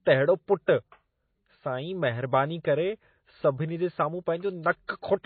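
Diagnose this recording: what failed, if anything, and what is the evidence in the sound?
The failure is at the codec stage, and it runs through the whole speech clip. Nothing is present above 4.6 kHz. The top end stops at a hard shelf, with the dull, smeared texture of heavy MP3 coding. That points to a very low-bitrate first encode, around 24 kbit/s. The file looks like low-bitrate audio saved at a high bitrate, likely re-encoded at about 256 kbit/s. The second pass cannot restore the discarded band or remove the earlier artefacts.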